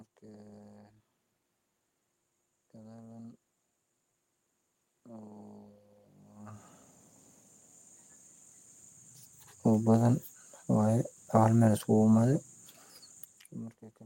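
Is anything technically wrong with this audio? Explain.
No, nothing here points to a technical problem; the background noise is just the room the microphone was in, and the level shifts around six and thirteen seconds are the talker moving relative to the microphone.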